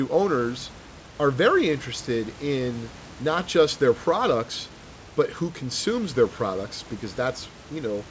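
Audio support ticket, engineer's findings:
No faults found: the speech comes over the call path band-limited at 8 kHz, which fits a wideband codec such as G.722, with its ordinary coding noise and room noise about 24 dB below the speech.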